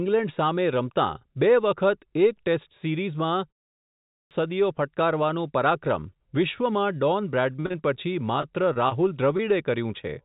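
At 3.79 s, after a 0.35 s pause, there is a clipped start. The output device had dozed off and lost about 0.52 s of sound, so the sound bursts in abruptly, missing its onset.

From 7.52 to 7.97 s comes repeated packet loss. Six gaps, the longest 39 ms, were patched by extending prior audio. About a third is concealed, giving choppy, robotic sound.

From 8.41 to 8.45 s there is a short stall from a late packet. The jitter buffer ran dry, so 20 ms was stretched to hold the sound briefly, with nothing lost.

Short concealed packet loss follows at 8.73–8.77 s, 8.89–8.93 s and 9.37–9.41 s. Each dropped about 20 ms, filled by continuing the last sound. Each is a quick smear or wobble.

Throughout, the call path passes nothing above 4 kHz, which fits a narrowband G.711 codec.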